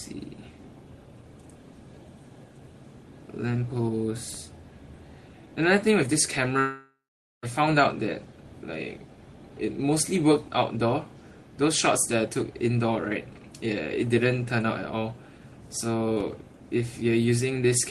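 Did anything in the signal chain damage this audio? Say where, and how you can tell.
Yes. At the network stage there's a long network dropout from 6.59 to 7.46 s. The last sound is stretched into a fading buzz, then about half a second of silence before audio resumes with a chunk missing, likely packets lost in transit on the call path.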